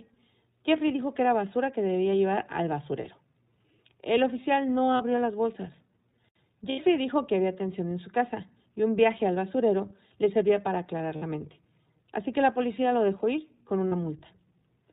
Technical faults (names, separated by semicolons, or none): iLBC codec; lost iLBC frames